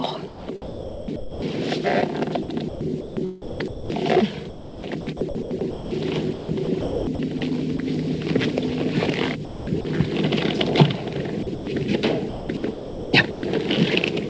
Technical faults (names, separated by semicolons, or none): sound chopped by the voice detector; sound dropped by the voice detector